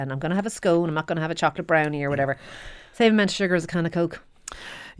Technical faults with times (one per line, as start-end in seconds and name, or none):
none